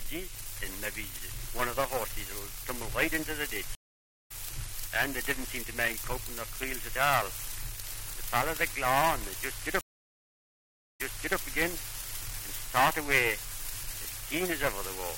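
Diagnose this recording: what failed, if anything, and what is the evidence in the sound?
Network-stage stream reconnect: silent gaps at 3.75 s (0.52 s, resuming roughly 0.4 s later) and 9.81 s (1.16 s, replaying 0.42 s), shown as blank spectrogram columns before a restarted decoder fades in.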